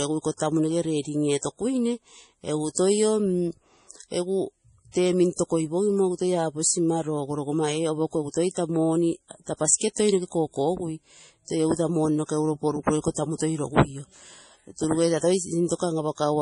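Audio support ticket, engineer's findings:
Watery, swirly texture throughout speech, heavy. Nothing above 10.5 kHz. Likely MP3 compression, starved of bits. Damage fits roughly 32 kbps. Encoder cuts the top band, drops weak frequency lines. These flicker frame to frame. Attacks smeared.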